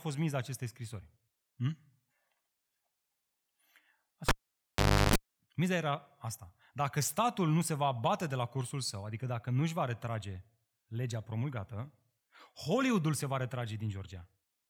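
Cable pulled and plugged in at 4.29–5.16 s in this speech recording: a pop, about 0.82 s of near silence, a 0.35 s burst of 50 Hz mains buzz as the plug tip touches, then a second pop.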